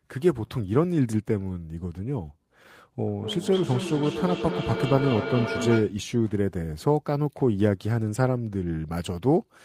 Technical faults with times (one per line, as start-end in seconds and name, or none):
3.08-6.02 feedback echo between two devices